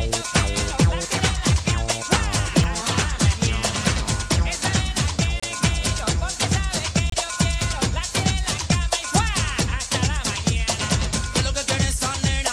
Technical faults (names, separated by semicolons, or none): audio missing between chunks; corrupt frame decoded